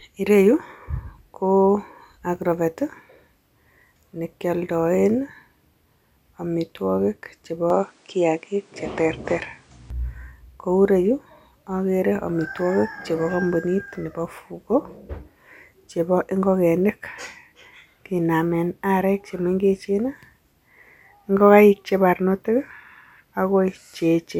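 From 7.70 to 9.90 s the recording system likely switched its input to a poorer device. The speech loses everything above 10.2 kHz and turns duller, with faint new background noise well below the speech, while the level stays about the same and there is no gap at the switch.

At 16.21 s, DAB burbling occurs: under weak reception, a small trickle of bit errors slipped past error correction into the MP2 data. This fits a few corrupted frames, whose wrong samples put short blips of noise in single sub-bands, producing a few watery blips over the speech.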